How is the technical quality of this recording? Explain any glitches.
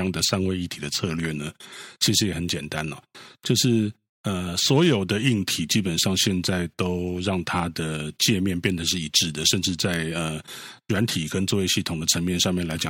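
There's one real problem running right through the speech. From about 0.13 s to 12.86 s you get clock slip clicks, a faint ticking roughly ten times a second. It's likely two devices on unsynced clocks, drifting apart by something like 200 ppm, so a single sample gets dropped or repeated each time the gap reaches a full sample.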